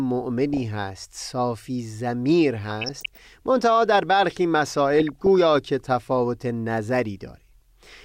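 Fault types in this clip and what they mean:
DAB burbling: weak reception lets bit errors slip past error correction into the MP2 audio, corrupting samples and scale factors so individual sub-bands jump in level frame by frame. In this speech it gives blips of noise in three short bursts, consistent with a bit error rate below half a percent.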